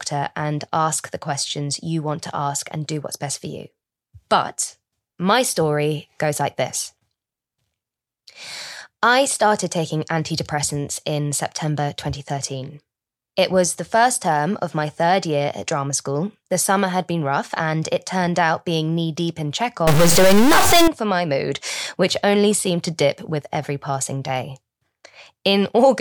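From 19.87 to 20.88 s, between "being knee deep in" and "for my mood which", the signal was likely hit by a stuck bit, one data bit held at a fixed value by a broken line or converter. About half the samples are pushed off by that bit's weight, roughly -10 dBFS, in a pattern that follows the waveform. The speech turns harsh and buzzy for that second, and the gaps between syllables fill with loud noise.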